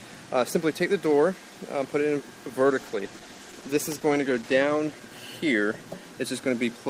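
From 2.7 s to about 5.51 s there's a call bitrate drop: the encoder gets starved of bits, sounding like a fall from roughly 32 to 15 kbps. For about two seconds the audio goes coarse and watery, with the top end dulled, before clearing up.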